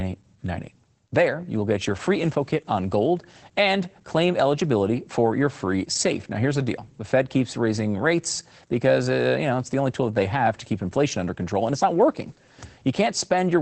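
Opus voice compression runs through the whole speech clip. The band stops at about 8.6 kHz, consistent with wideband SILK coding, and the coarse excitation leaves the voice audibly hoarse and faintly robotic, which fits a bitrate around 12 kbps.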